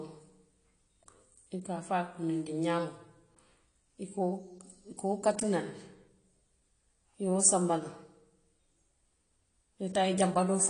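From start to finish the speech has a hard ceiling, with nothing above about 10.1 kHz, and it sounds dull and smeared, with a fizzy, warbling texture on sibilants and held sounds. That pattern points to AAC compression, likely AAC-LC at a low rate, which fits roughly 32 kbps. Starved of bits, the encoder drops the top band and quantises the remaining frequency lines coarsely against its hearing model, leaving plainly audible artefacts.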